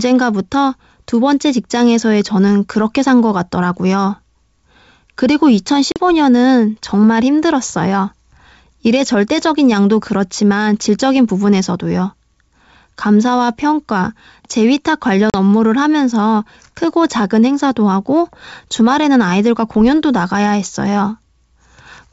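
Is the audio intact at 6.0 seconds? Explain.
No. Packet loss on an ADPCM call hits 5.92 to 6.00 s. About 40 ms of speech, a couple of packets, drops to a hard-edged silence. The G.722 decoder's predictor and step size then lose sync, so the speech returns with brief distortion before settling.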